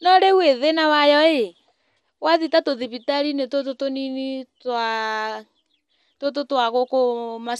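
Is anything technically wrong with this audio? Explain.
Yes. The speech sounds dull and gurgly throughout, likely from MP2 compression at around 80 kbps, with upper sub-bands switching off and the remaining bands coarsely quantised.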